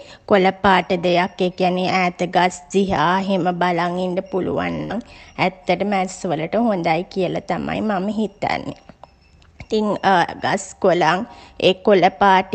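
At about 4.83 s the speech hits a burst of packet loss lasting to roughly 4.92 s. A short run of audio never arrived in time, so the receiver kept stretching the last bit it had for about 62 ms, letting it fade as it went, then jumped back in with about 60 ms of the speech simply gone. You hear a brief smeared, dying tail and then a skip. This all rides on a call path whose top end stops around 8 kHz, which fits Opus at a modest bitrate.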